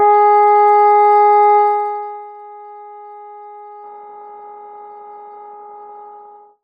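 From 1.57 to 2.33 s there's zipper noise. The level comes down by roughly 25 dB, but in coarse steps, around a hundred a second, with no smoothing between them. Each jump clicks, so you hear a fine zipping texture riding on the sound during the fade.

Then at 3.83 s, running to the end, an adaptive stream at a lower bitrate takes over. The quality drops suddenly with no gap, and nothing survives above 7.5 kHz. The dull top end fits a switch down to something like 12 kbit/s.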